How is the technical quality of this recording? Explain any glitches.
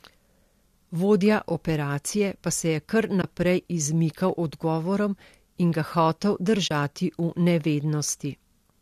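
The speech has two short dropouts. Underneath, there's a faint roughness, likely from light low-delay AAC compression.

At 3.22–3.24 s and 6.68–6.71 s there's AAC frame loss with muting. Lost frames were zeroed, and the overlapping windows fade the sound out and back in, leaving soft-edged holes. They last about 20 ms and 30 ms, which fits two and three short 10 ms frames.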